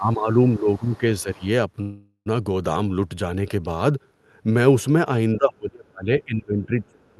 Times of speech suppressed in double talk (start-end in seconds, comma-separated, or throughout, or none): 0.00-1.43, 5.37-7.20